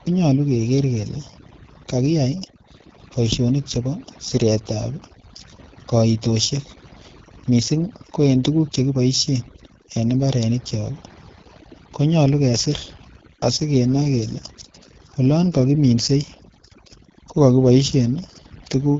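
From start to finish, the background sits in an unnatural near silence dotted with twinkling specks. This is overdone noise removal: a noise reduction stage set far too aggressively pulls individual frequency bands down or off whenever they come close to its noise estimate. Quieter parts of the speech fall under that threshold and are stripped away along with the noise, leaving the broken-up, warbling background heard throughout.

Layered over that, the speech has a rough, raspy, grainy edge across the whole clip, and the audio stops sharply with nothing above 7.5 kHz. That is the AMR wideband (HD Voice) codec, AMR-WB. It models the speech up to 6.4 kHz with a pulse-excited vocal tract filter and fills the top band with shaped noise. The plainly audible coarseness points to one of its lowest bitrate modes, around 8.85 kbit/s.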